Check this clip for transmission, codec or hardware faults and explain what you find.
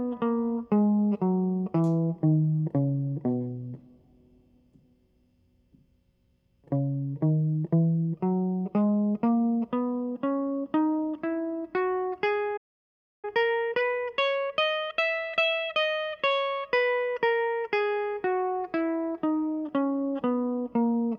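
Two playback faults occur in the music, one after the other.

At 12.57 s there is a playback stall lasting about 0.66 s. The music cuts to silence, likely because the player ran dry of data, then resumes at 13.25 s.

From 13.25 to 15.89 s comes time-compressed catch-up. Small pieces are cut and cross-faded to clear the backlog. The music runs 1.25 times fast at normal pitch.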